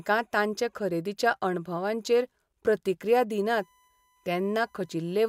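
A speech clip with a USB whine creeping in from about 3.6 s, just after "खरेदीच्या अणभवांचेर प्रतिक्रिया दिनात", and running to the end. It's a steady 1 kHz tone, very quiet (roughly 40 dB under the speech), which fits the bus's 1 ms frame timing leaking into the audio through power or ground.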